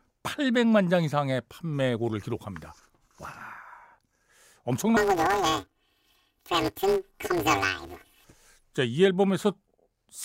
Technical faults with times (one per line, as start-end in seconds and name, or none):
4.97-8.24 planar audio read as interleaved